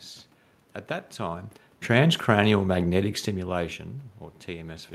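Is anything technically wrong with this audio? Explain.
No, nothing technically wrong.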